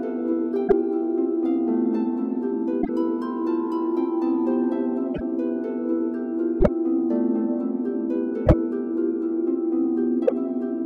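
At 0.67, 2.81, 5.14, 6.60, 8.45 and 10.26 s the sound jumps ahead with a garbled 58 to 84 ms glitch spanning two to three 26.1 ms frames, likely a broken MP3 bit reservoir after dropped frames. Spectrograms show brief vertical smears. Waveforms show abrupt discontinuities.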